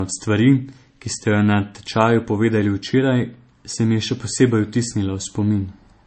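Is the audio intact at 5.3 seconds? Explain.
No. At 5.3 seconds, as throughout the clip, the speech has nothing above about 8.3 kHz and carries the smeared, swirly texture of heavy MP3 coding. This is likely low-bitrate audio saved at a high bitrate: an earlier MP3 pass at a very low rate, around 33 kbit/s, stripped the detail, and a later re-encode at a high rate kept that damage. A plain low-pass filter would dull the top without these coding artefacts.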